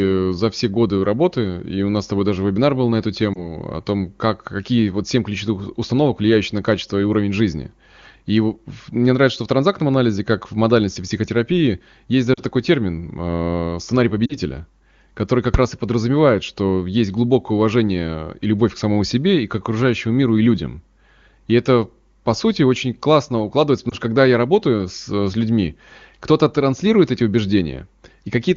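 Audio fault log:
3.33–3.50 s, 12.34–12.43 s, 14.25–14.38 s, 23.90–23.95 s: lost AMR speech frames. Each gap fits one or two missing 20 ms frames. The decoder repeats the last pitch and vocal-tract settings at falling gain, giving a brief warble or dip. On a spectrogram, the harmonics smear flat and fade before the speech resumes.
15.54 s: invalid numbers at full scale. A calculation produced non-finite values that were clamped to maximum amplitude. The burst is too short for separate edges, which fits a 128-sample block, so it is heard as one sharp bang. The waveform shows a flat slab pinned at one extreme, and the spectrogram shows a full-band vertical stripe.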